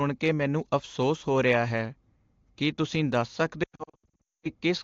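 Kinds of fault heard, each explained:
Lost AMR speech frames: after "ਕੀ ਤੁਸੀਂ ਦੱਸ", from 3.63 to 4.49 s, the decoder kept rebuilding speech from the last good pitch and vocal tract settings at falling gain. The result is repeated brief dips and warbles, scattered across 0.8 s and totalling about 620 ms of missing sound. The longest run lasts 220 ms and drops to near silence within two frames. That fading, pitch-held smearing sets it apart from plain dropouts, which cut to silence abruptly.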